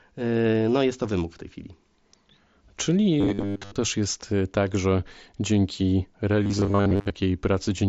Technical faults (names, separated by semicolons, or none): robotic sound from repeated short buffers